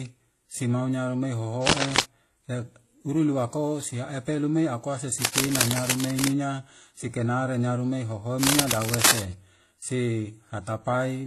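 Across the whole clip the speech has a dull, smeared top end with swirly, metallic artefacts layered over a second, grainier kind of roughness, so two distinct codec signatures are heard at once. This is likely transcoding between lossy codecs: a very low-rate HE-AAC-style encode, which fits something around 16 kbit/s, set the low cut-off, and a later WMA pass, which fits something near 48 kbit/s, spent its bits re-encoding those flaws and added its own.

From 1.66 to 2.03 s a burst of harsh, uneven scratching sits over the speech, somewhat louder than the voice itself. It returns from 5.22 to 6.30 s at roughly the same level as the speech, and again from 8.43 to 9.23 s, once more a little above it. This is cable scratch noise, likely from a worn cable, connector or control being moved so that its contact resistance jumped about rapidly, injecting dense crackling into the signal.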